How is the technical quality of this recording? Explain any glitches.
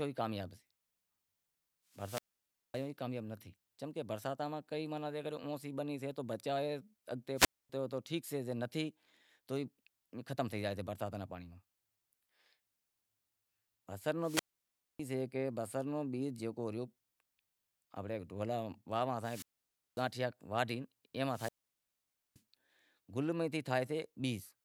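The recording has five wireless microphone squelch dropouts: 1.91–2.89 s (0.56 s mute, before "تو کامیاب نیں تھے"), 7.36–7.69 s (0.25 s, after "سے تو بچائے اگتے"), 14.20–15.00 s (0.60 s), 19.17–20.10 s (0.55 s) and 21.27–22.42 s (0.87 s). Each time, the radio link weakens and hiss rises. The receiver's squelch then mutes the output into near silence before the speech returns.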